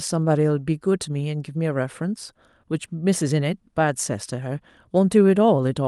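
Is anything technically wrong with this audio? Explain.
No, nothing technically wrong can be heard in this speech clip. There is no fault to point to at any moment in it.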